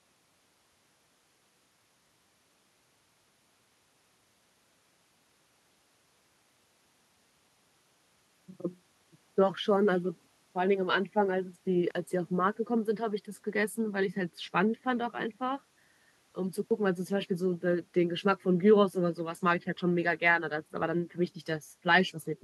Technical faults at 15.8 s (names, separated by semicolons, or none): none